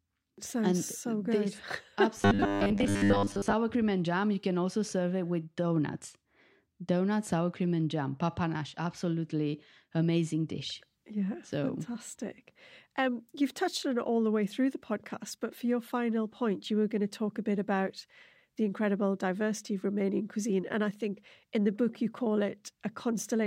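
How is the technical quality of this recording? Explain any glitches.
There's one clear glitch in this speech clip. From 2.17 to 3.54 s, just before "cream and jam", you get robotic sound from repeated short buffers: a rigid, metallic buzz at 100 Hz. That's likely starved playback looping the last 10 ms or so, with most of the real audio skipped.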